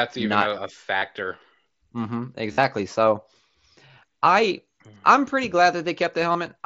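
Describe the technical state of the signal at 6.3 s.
Concealed Bluetooth headset packet loss occurs from 6.32 to 6.35 s, a gap of about 30 ms that fits several consecutive lost packets. The receiver fills the gap by repeating the best-matching stretch of the preceding waveform, so the audio there becomes a short buzzy tone held at full level, with a small warble as real sound resumes. The surrounding mSBC headset codec audio is limited to 8 kHz, with light codec damage.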